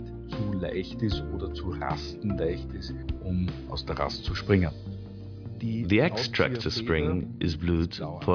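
No technical fault can be heard anywhere in the audio, and the signal keeps a steady, continuous path throughout.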